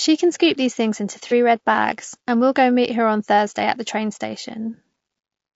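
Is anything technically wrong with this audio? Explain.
Yes, two faults. Throughout, the speech sounds rough and grainy, with noise between harmonics. This is likely low-delay AAC compression at a low bitrate around 32 kbps.

At 1.28 to 1.32 s, between "scoop these things into" and "red bags and we", there is AAC frame loss with concealment. About 30 ms is missing. The decoder filled it from the previous spectrum, leaving a brief smeared, noisy patch.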